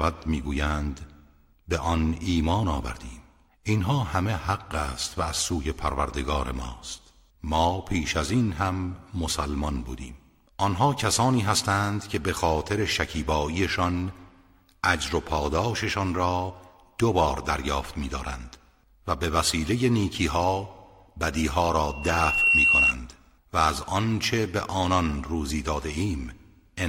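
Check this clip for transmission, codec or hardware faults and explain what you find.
One fault is present: loudspeaker feedback squeal, from 21.87 s to 22.94 s. A microphone was picking up a loudspeaker it was feeding, and at about 2.7 kHz the loop gain rose above unity, so that frequency kept reinforcing itself on each pass. It is heard as a pure tone that swells over most of a second until it sits roughly 5 dB above the surrounding sound, then stops at 22.94 s.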